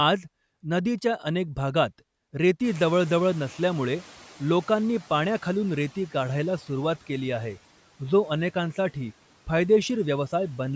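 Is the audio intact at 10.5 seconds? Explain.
Yes, the speech is intact at 10.5 seconds, with nothing there but the normal call microphone processing and the room noise sitting about 25 dB below the voice.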